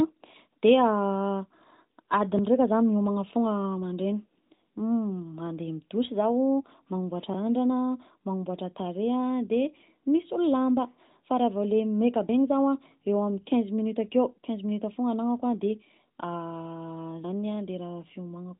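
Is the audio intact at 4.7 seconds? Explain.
Yes, at 4.7 seconds the audio is intact, with the speech carried through the AMR narrowband mobile codec as expected and no fault present at that moment.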